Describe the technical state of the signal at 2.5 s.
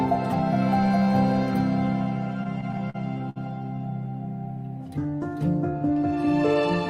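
Packets are arriving late, so between 2.43 and 3.38 s the jitter buffer runs dry seven times and the receiver stretches the last sound to bridge about 163 ms, the longest gap 60 ms. The result is repeated stalls (stutter): dragging, hiccuping audio with nothing lost.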